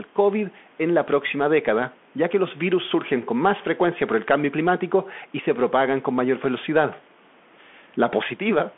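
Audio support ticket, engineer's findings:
Bluetooth CVSD headset codec, whole clip. Speech band-limited to roughly 200 Hz–3.4 kHz, nothing above 3.7 kHz. Plainly audible codec damage: scratchy sibilants, grainy hiss under speech, distortion on loud high content. Probable component: headset link on narrowband CVSD at 64 kbps. Mechanism: one-bit up/down encoding with adaptive step cannot track fast, loud transients.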